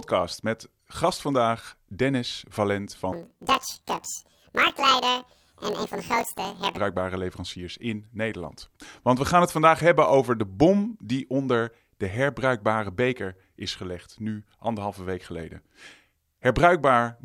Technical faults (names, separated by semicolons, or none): planar audio read as interleaved